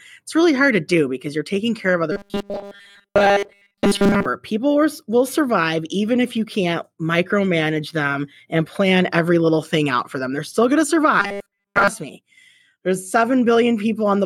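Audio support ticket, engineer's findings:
Robotic sound from repeated short buffers, 2.12–4.26 s after "you're taking care of" and 11.20–11.88 s after "still going to". Rigid metallic buzz at 200 Hz, fitting a 5 ms repeated buffer, likely starved playback loop. Most input skipped. Fixed buzz pitch, no gaps, unlike dropouts.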